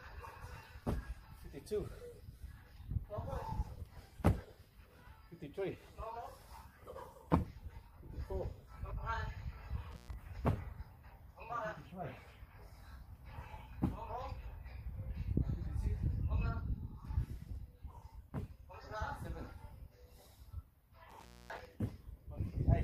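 Intermittent contact occurs at 9.91 to 10.13 s and again at 21.10 to 21.65 s. A loose connection briefly opens, for about 0.12 s and then 0.25 s, dropping the sound to faint hiss between crackles. The waveform shows near-flat gaps edged by spikes, and the spectrogram shows dark bands bounded by broadband vertical streaks.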